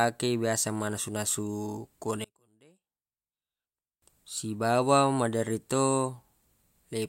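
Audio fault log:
2.24 to 4.02 s, one channel inverted: the speech falls by about 32 dB to a faint residue and stays there until it recovers just before "sibawa maderri". The likely cause is reversed polarity on one stereo channel. When the two sides are summed to mono, everything they share cancels, including the centred speech and its low end. Only the small difference between left and right survives, which is why so little is left audible during this stretch.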